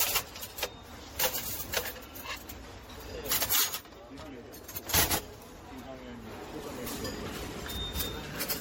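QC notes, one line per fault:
Throughout, generation loss: the sound comes across swirly, smeared and hollow, with blurred attacks and nothing above 16.6 kHz, which is more damage than a single low-bitrate pass would leave. The likely cause is repeated lossy re-encoding, something like ten MP3 passes at a rate that points to around 64 kbit/s. Each pass requantises on a shifted frame grid, so the noise and spectral holes keep stacking up.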